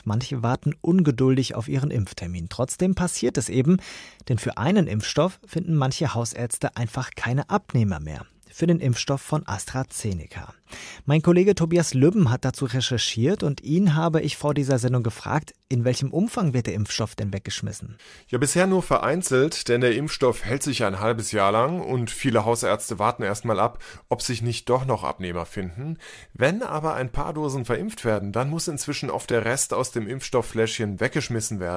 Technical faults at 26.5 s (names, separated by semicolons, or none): none